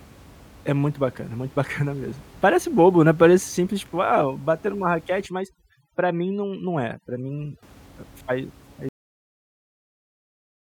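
From 5.26 to 7.63 s, overdone noise removal sets in: the reduction is working too aggressively, pulling individual frequency bands down whenever they sit near its noise estimate. The room noise, about 26 dB below the speech, collapses into twinkling specks, and quieter speech components vanish. At 8.89 s there is a cut-off end: the final buffers were never written out, so the speech stops mid-sound and drops straight to digital silence with no natural decay, holding that silence to the end.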